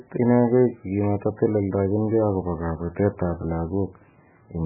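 Speech with MP3 compression throughout, likely at a very low bitrate, heavy damage: nothing above about 2.6 kHz, so it's dull and watery, with swirling.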